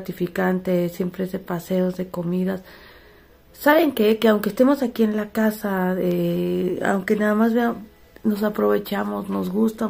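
From 0.13 s to 9.11 s, periodic USB or driver dropouts strike once every 1.0 s, about ten in all. Each drops a sliver of a millisecond to silence, heard as a regular tick. Waveforms show hairline gaps; spectrograms show evenly spaced thin broadband vertical lines.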